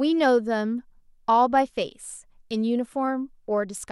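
A Bluetooth SBC bit pool drop sets in at 3.57 s and lasts to the end of the clip at 3.92 s. The link appears to have been squeezed, and the encoder cut the bits it spends on each frame, which fits a fall from a bit pool of 31 to about 14, near 99 kbps. The highest sub-bands are starved and the rest coarsely quantised, so the speech turns dull in the treble while a gritty noise rises underneath.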